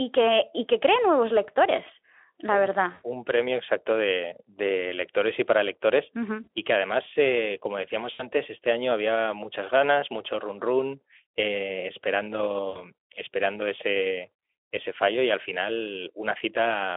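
Speech over a Speex narrowband link, band-limited to roughly 300 Hz to 3.4 kHz, shows VoIP packet loss concealed by the speech codec at 2.91–3.06 s, 6.43–6.48 s, 8.13–8.26 s and 12.69–12.80 s. The decoder stretches the last pitch and filter into a fading buzzy tone or coloured noise, consistent with about 120, 40, 60 and 60 ms of missing audio, and the sound stays weak briefly afterward.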